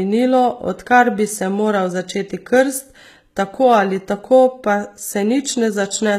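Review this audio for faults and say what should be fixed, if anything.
The s sounds turn gritty and lispy all the way through, with nothing above 14.9 kHz. That's likely HE-AAC compression at a very low bitrate, around 20 kbps, where the treble is copied up from lower bands instead of coded. Give it more bitrate, or use plain AAC or a lossless export, so the highs are actually encoded.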